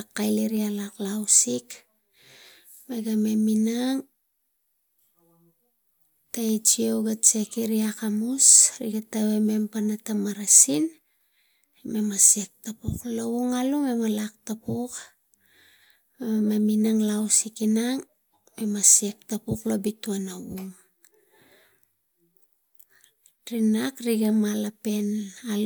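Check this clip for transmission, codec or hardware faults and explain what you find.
Nothing in this speech recording points to any transmission, codec or hardware trouble, so there's nothing to flag here.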